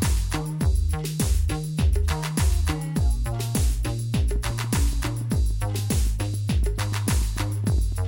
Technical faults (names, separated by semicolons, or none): train of clicks